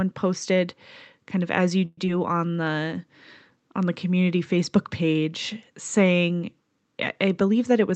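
At 1.85 to 1.99 s the speech halts in a call audio freeze. For about 120 ms the last sound is carried on as a fading buzz or hiss, ending in roughly 20 ms of silence, and then the speech resumes exactly where it stopped. Packets were likely held up in transit, draining the jitter buffer. Unlike a skip, nothing is lost; a pause has simply been inserted.

Right after, at 2.05 to 2.08 s, comes the opposite, a skip ahead. Roughly 70 ms of speech is dropped and the two sides are butted together with only a brief join of about 10 ms. Instead of a gap, the speech lurches forward, missing a fragment.

From 2.33 to 2.69 s a jitter buffer slow-down stretches the speech to 86% speed. Repeated pitch periods add 60 ms to rebuild the buffer's reserve. The pitch stays the same while sounds drag out, so unlike the freeze there is no stop, just a smeared, drawn-out stretch.

Near the end, from 7.48 to 7.94 s, a jitter buffer speed-up pushes the speech to 112% speed. 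Roughly 70 ms of short pitch-period pieces are cut to shed excess delay. The pitch is unchanged but the delivery sounds hurried, the reverse of the earlier stretch. Throughout, the Opus call path's top end stops at 8 kHz, which fits a mid-range call bitrate.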